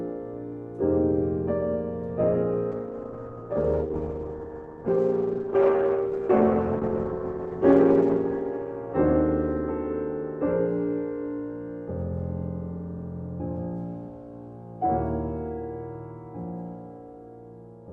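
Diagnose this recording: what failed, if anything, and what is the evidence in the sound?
A call bitrate drop at the network and codec stage runs from 2.72 s to 9.25 s, with the low point lasting about 5.5 s. Coding turns coarse and watery, which fits Opus being pushed from 32 to 11 kbps. A spectrogram would show the top band thinning, then restoring.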